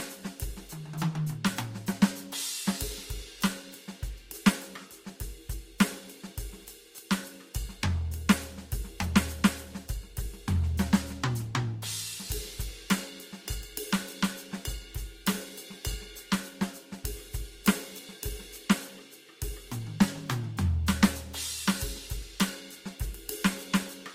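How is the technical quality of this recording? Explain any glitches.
The music is degraded throughout by transcoding between lossy codecs. From start to finish, nothing is present above 16.7 kHz, and the detail carries two different kinds of codec artefact combined. The likely cause is a low-rate encode, consistent with Opus at around 32 kbit/s, re-encoded to Vorbis at roughly 51 kbit/s. The second codec spent bits reproducing the first codec's artefacts and added its own, so both sets are heard together.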